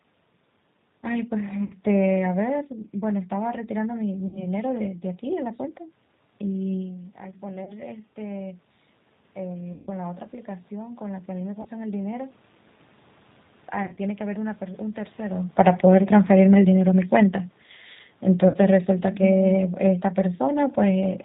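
G.729 codec damage runs through the whole of this speech recording. The sound is cut off above 4 kHz and has the slightly rough, synthetic texture of a decoder that rebuilds each 10 ms frame from a vocal-tract filter, a pitch predictor and a handful of pulses. The roughness is plainly audible and fits the 8 kbit/s G.729A variant. VoIP packet loss concealed by the speech codec breaks in at 1.64–1.73, 4.27–4.47, 7.64–7.72, 9.73–9.91, 11.62–11.69, 13.83–13.99 and 18.48–18.57 s. Most gaps are 30 or 60 ms of missing audio. The one at 9.73 s is 140 ms, and the one at 13.83 s is broken pieces totalling 90 ms over 140 ms, none longer than 40 ms. In each gap the decoder keeps repeating its last pitch and filter at falling gain, so the sound smears into a fading buzz or coloured noise. Because every frame depends on the one before, the sound stays weak or distorted briefly after packets resume. Automatic gain falling sets in from 15.44 to 21.15 s. 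The level sinks by about 6 dB along with the room background, as the gain control decides the input is too loud or its background noise too strong and turns itself down step by step. This starts close to a point near 15.5 s where the talker shifts relative to the microphone.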